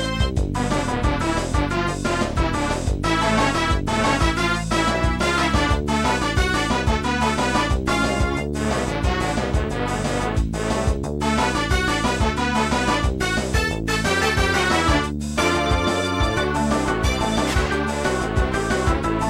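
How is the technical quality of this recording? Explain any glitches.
No glitches to report: nothing in the recording breaks, drops out or distorts at any point.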